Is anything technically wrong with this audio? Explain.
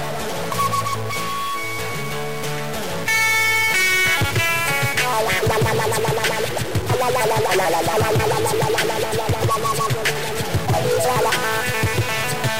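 Yes. A stuck bit runs through the whole clip. The cause is likely one data bit held at a fixed value, perhaps from a broken line or converter. About half of all samples are then shifted by that bit's weight, a step of around -25 dBFS, in a pattern that follows the waveform. Because a bit that large sits high in the word, the sound carries buzzy distortion, and the pauses fill with noise as the bit flips with the sign of small values.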